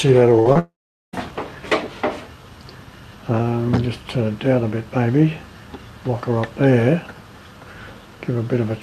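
The audio has three losses in its first second. At 0.39 to 0.47 s, a burst of packet loss is heard: about 60 ms is missing, bridged by the last sound continued and fading. At 0.53 to 0.57 s, a short concealed packet loss leaves a brief smear where about 20 ms never arrived. From 0.59 to 1.15 s, the sound stretches into a decaying tail, then goes silent for about 0.42 s before resuming further on. That gap is likely a long network dropout, with about 0.54 s of audio lost.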